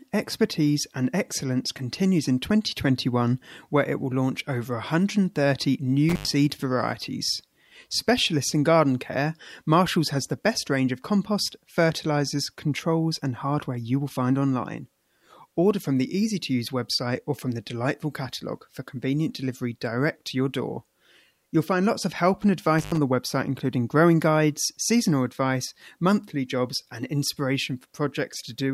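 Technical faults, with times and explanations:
6.09–6.28 s and 22.79–22.97 s, intermittent contact: twice the speech drops out as if a plug or cable lost its connection for a moment. The line goes open for about 94 ms the first time and about 80 ms the second, leaving faint hiss in the gap. There's a crackle at the edges of each break, which is the contact scraping as it opens and closes again.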